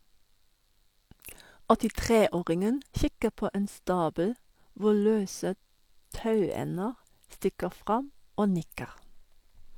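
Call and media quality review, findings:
No audible faults found.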